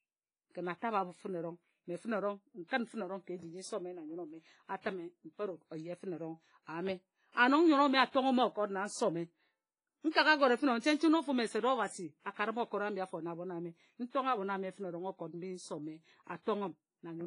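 From the start, the speech has a ringing, washy quality and a hiss that breathes with it, and there's nothing above 10.2 kHz. That's likely heavy WMA compression at a low bitrate, around 24 kbps. There's pre-echo at 2.67–2.71 s and 10.10–10.15 s: a short hiss smeared about 39 ms and 51 ms ahead of sharp attacks, softening them.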